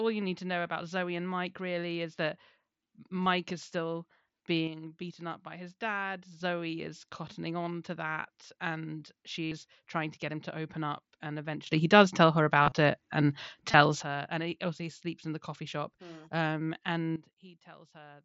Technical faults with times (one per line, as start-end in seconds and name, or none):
3.23-3.26 concealed Bluetooth headset packet loss
4.67-6.40 sudden gain jump
9.45-9.52 concealed Bluetooth headset packet loss
11.66-14.02 sudden gain jump
12.63-12.72 concealed Bluetooth headset packet loss
13.71-13.74 concealed Bluetooth headset packet loss
17.16-18.25 sudden gain jump